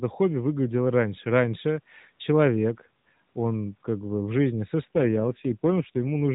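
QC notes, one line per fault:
4.96–6.33 s, AMR rate drop: Right after "как бы в жизни" the speech turns rougher and more synthetic through to the end. The band and continuity stay intact. The mobile codec is spending fewer bits on the voice, consistent with a step from 12.2 to 5.9 kbps.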